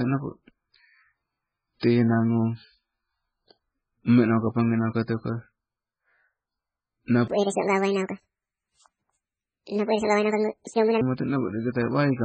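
Throughout, the speech sounds watery and swirly. This is likely heavy MP3 compression at a very low bitrate. Its flickering artefacts set it apart from a clean low-pass filter. From 7.28 to 11.01 s, a section at the wrong speed runs 1.77 times fast, roughly ten semitones higher. Pace and pitch rise together, so a pitch-shift alone is likely ruled out.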